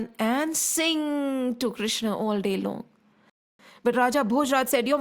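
At 3.30 s the speech just drops out for about 0.29 s, a playback stall, likely the player running dry or its thread getting blocked, before resuming at 3.59 s. From there to the end you get time-compressed catch-up: the player trims its backlog by splicing out little bits, so the speech runs about 1.1 times fast at normal pitch.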